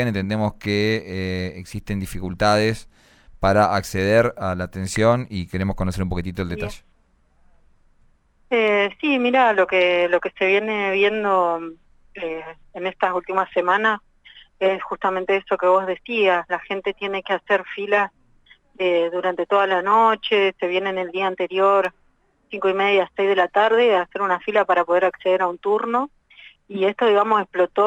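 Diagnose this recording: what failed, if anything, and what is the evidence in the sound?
Nothing failed; no fault is audible anywhere.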